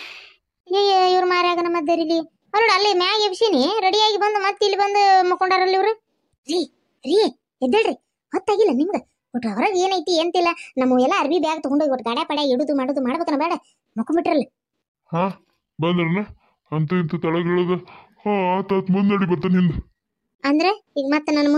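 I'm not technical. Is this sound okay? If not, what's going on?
Yes, nothing wrong stands out in the audio; no faults found.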